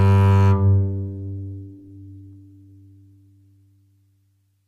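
A call bitrate drop hits this music clip at 0.63 s and lasts to the end. The bandwidth estimate fell and the encoder was starved of bits, with the sound pointing to a fall from roughly 48 kbps to around 15 kbps. Coding turns coarse, watery and dulled at the top, worst for about 1.43 s.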